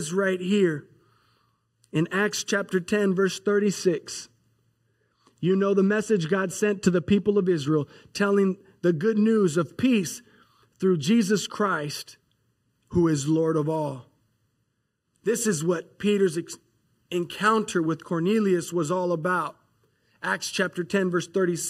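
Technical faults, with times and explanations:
Throughout, channel delay (comb filtering): one channel trails the other by under a millisecond, roughly 0.7 ms. When the two are summed to mono, the shared speech cancels at evenly spaced frequencies beginning near 700 Hz, leaving fixed notches and a hollow, phasey tone.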